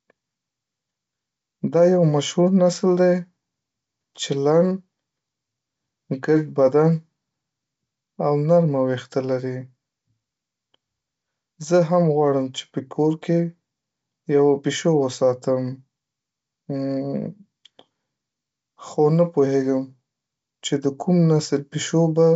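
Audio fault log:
Nothing stood out on listening to this speech clip, which comes through G.722 wideband telephone coding at 64 kbit/s.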